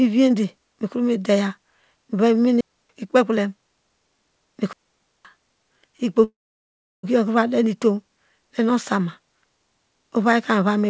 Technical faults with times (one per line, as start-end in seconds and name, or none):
2.61-2.90 digital wireless dropout
4.73-5.25 digital wireless dropout
6.24-7.05 call audio freeze